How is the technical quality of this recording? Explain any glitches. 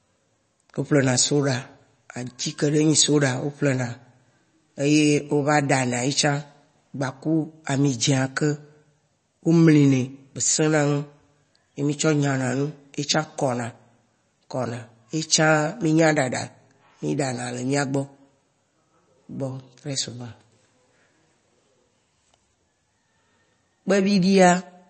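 The recording sounds dull and watery from start to finish. Nothing reaches above 8.3 kHz, and the sound has an audible swirly, chirping texture with smeared onsets. The likely cause is MP3 compression at a very low bitrate, around 32 kbps. Short of bits, the encoder cuts the treble at a fixed frequency and drops weak frequency components, which then flicker on and off between frames.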